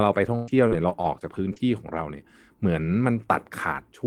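From 0.35 to 1.06 s the speech breaks up with repeated packet loss, giving a robotic sound. Four gaps open in this stretch. Together they remove about 200 ms of audio, and the longest gap lasts 120 ms. The receiver patches each hole by stretching the last sound forward, so about 29% of the span is concealment rather than real speech. Roughly 70 ms of it is only roughly rebuilt. The result is choppy, robotic speech with pieces missing.

At 1.54 to 1.58 s comes a short concealed packet loss. About 20 ms never arrived in time. The decoder continues the preceding sound to cover it, then blends back into the real signal. This is heard as a brief smear or wobble, and a short consonant can disappear inside it.

Next comes a lost packet rebuilt from error correction, at 1.56 to 1.58 s. Three more follow, at 1.88 to 1.90 s, 1.92 to 1.94 s and 1.96 to 1.98 s. Each covers 20 ms. In every case the following packet carried a low-bitrate copy of the lost one, and the decoder played that copy. 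So there is no gap. Instead each 20 ms frame sounds rougher and noisier than the speech around it.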